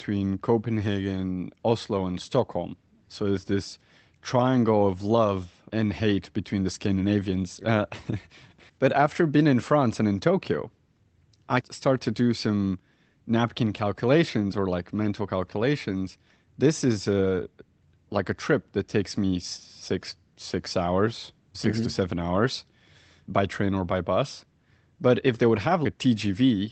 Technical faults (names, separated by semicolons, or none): none